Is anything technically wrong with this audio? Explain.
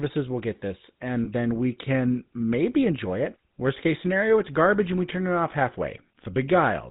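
Yes. Two faults are audible.

The GSM full-rate codec colours the whole clip. Its buzzy, gravelly roughness fits 13 kbps coding. It models the vocal tract and excites it with sparse, regular pulses. Nothing above 4 kHz survives, so the speech sounds dull and rasping.

Lost GSM frames occur from 1.24 to 1.28 s. The gap points to one missing 20 ms frame. The decoder repeated the last good frame. That produces a brief, rough metallic ring in place of the missing sound.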